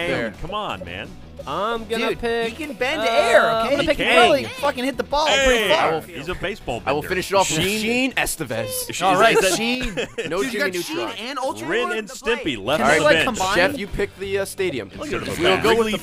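From 5.75 to 6.61 s the level drops abruptly by about 6 dB, then snaps back. It happens again, longer, from 9.75 to 12.15 s. The likely cause is one channel dropping out. With one stereo side gone, the mono sum keeps only half of the shared material. Anything carried by the lost side alone vanishes for those spans. Each drop sounds like a sudden step down in loudness, not a fade.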